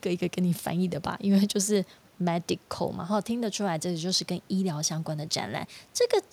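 Nothing stood out on listening to this speech clip, with only faint room noise sitting about 35 dB below the speech.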